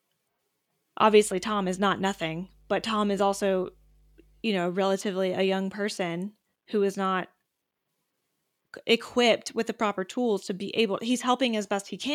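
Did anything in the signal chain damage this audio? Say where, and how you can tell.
Yes, there's mains hum from 1.08 to 4.45 s: a steady 50 Hz tone sitting roughly 35 dB under the speech. That points to the analogue wiring, probably a ground loop or nearby transformer bleeding the power line into the signal for that stretch.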